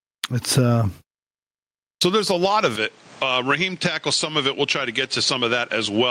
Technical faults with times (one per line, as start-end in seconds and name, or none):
0.00-6.11 gain pumping